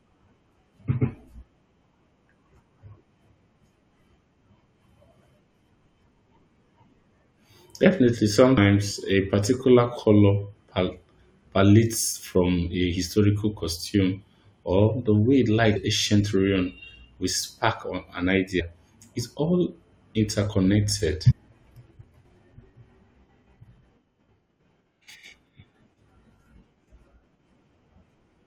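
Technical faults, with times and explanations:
8.56, 15.75, 18.59–18.61, 21.30–21.32 and 23.62 s, damaged data in the compressed stream: five brief glitches cut into the speech, each lasting only about 12 to 22 ms. Bytes in the coded stream got mangled at those spots, so the decoder misread the affected frames and briefly lost its lock on the frame structure. It then had to hunt for the next valid frame header before normal decoding resumed.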